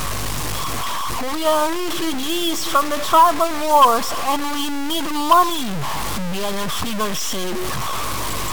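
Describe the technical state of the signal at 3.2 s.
At 3.2 s the speech carries grainy distortion that runs through the whole clip. The grit moves with the speech itself. Quiet stretches sound rough, and the faintest parts sputter or drop out. The error sits only about 10 dB below the speech. The likely cause is low bit depth without dither, with samples truncated to something near 4 bits. With so few levels and no added noise, the rounding error tracks the signal instead of staying a steady hiss.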